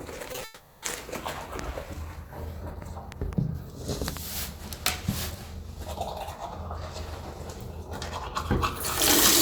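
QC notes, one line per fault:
0.32 to 0.41 s, short concealed packet loss: Three gaps sit close together, at 0.32 to 0.35 s, 0.35 to 0.38 s and 0.39 to 0.41 s. They cover 20 ms, 20 ms and 10 ms. Each time the audio did not arrive in time. The receiver extended the preceding sound to cover it, then blended back. The sound smears and wobbles briefly.
0.44 to 0.83 s, long network dropout: About 380 ms of audio never arrived, likely a network outage. The receiver filled the whole stretch by continuing the last sound. It does not drop to silence. The fill turns into a fading buzz or hiss that carries none of the real sound. When the audio resumes, that portion is simply gone.
3.12 to 3.35 s, loud pop: Two sharp pops land in quick succession, around 10 dB above the sound. The cause is likely a sudden voltage step, such as a plug, switch or static discharge. The sound continues underneath them.
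4.17 to 4.19 s, loud pop: A single pop lands, also around 10 dB above the sound. It has the same likely electrical cause and is heard as a brief thump.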